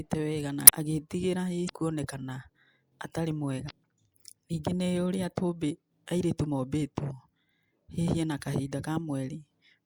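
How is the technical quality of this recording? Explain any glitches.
Three short glitches interrupt this speech recording, all from damaged data in a compressed stream. Right after "wega na", at 0.64–0.70 s, then at 1.65–1.70 s and 3.67–3.71 s, a brief glitch cuts in. Corrupted bytes make the decoder misread frames and lose sync until it finds the next frame header.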